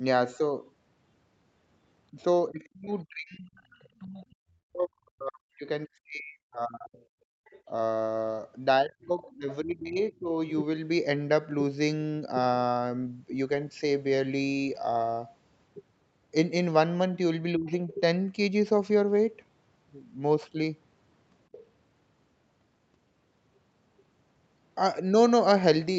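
From 2.12 to 6.99 s the speech dips and breaks up, at worst by about 40 dB. This is speech suppressed in double talk, likely because the echo canceller turned down both voices at once. Inside it, from 3.57 to 3.85 s, a faint second voice leaks through, about 35 dB down. That is likely residual loudspeaker echo. From 7.27 to 7.45 s the room sound drops by about 27 dB. This is background gated by the echo canceller, which clamped the microphone while the loudspeaker played. Right after, from 7.45 to 9.37 s, the other side's voice leaks through at about 30 dB below the speech, likely uncancelled echo. From 8.81 to 10.31 s speech suppression in double talk returns, with drops of about 25 dB, likely from the canceller ducking both voices. At 17.54 to 17.69 s the speech briefly dips about 20 dB, likely double-talk suppression again. Then the other voice leaks through from 17.69 to 17.94 s, about 20 dB down, likely residual echo. 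A last short leak sits at 21.52 to 21.60 s, about 25 dB down, likely the same uncancelled echo.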